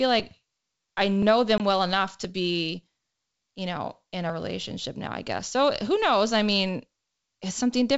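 Packet loss on an ADPCM call hits this speech recording at 1.58 to 1.63 s, carried over G.722 wideband coding at 64 kbit/s. About one 20 ms packet is replaced by silence, leaving a hard-edged hole. The decoder's adaptive predictor and step size fall out of step with the sender's, so the speech returns slightly distorted before resettling.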